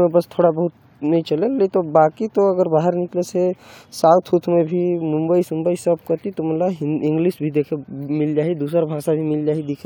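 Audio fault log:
The speech signal holds steady throughout, with no audible disturbance at any point.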